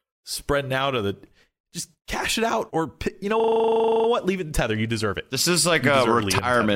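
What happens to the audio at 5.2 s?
Nothing goes wrong at 5.2 s; the speech runs through that moment intact, with no dropout, click or distortion.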